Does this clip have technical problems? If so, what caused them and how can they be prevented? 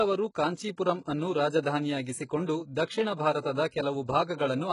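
Yes. The speech was likely squeezed through HE-AAC compression at a very low bitrate, heavy enough to fit something around 12 kbps, so only the lower spectrum was truly coded and the treble was rebuilt by copying lower bands upward under a coarse envelope. Throughout the clip, that synthetic top sits out of step with the real harmonics, making s sounds gritty and lispy, and nothing remains above about 11.1 kHz. Encoding at a higher bitrate, or with plain AAC or Opus, would prevent it.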